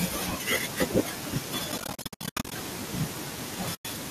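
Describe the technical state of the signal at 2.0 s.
At 2.0 s the speech sits inside a stretch of AAC frame loss with muting that runs from 1.72 to 2.52 s. About 540 ms of sound is missing, scattered across those 800 ms as short holes, the longest around 70 ms. The decoder zeroes the spectrum of each lost frame, and the overlapping windows fade the sound out and back in, so the gaps have soft edges rather than the clicks of a hard cut.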